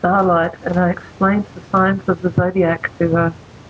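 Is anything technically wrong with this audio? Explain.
Yes. Gain pumping runs through the whole clip: the gain swings by around 10 dB, pulled down under every loud passage, likely from input gain set far too high with a fast limiter clamping it. Unlike a noise gate, the limiter never cuts the sound to silence.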